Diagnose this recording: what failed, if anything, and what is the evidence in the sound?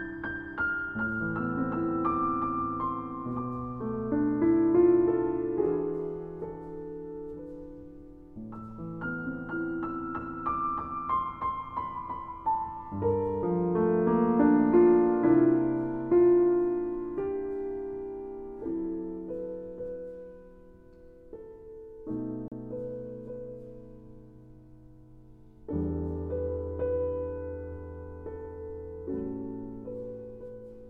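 Codec stage: separately encoded pieces joined untrimmed leave a gap at a join of encoded pieces, a 35 ms gap at 22.48 s with smeared edges.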